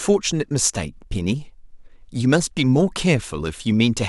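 No faults are audible anywhere in the recording.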